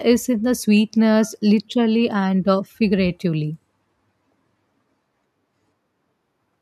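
A speech recording with no audible technical faults: the signal holds steady throughout, with no interruptions, distortion or level problems to point to at any moment.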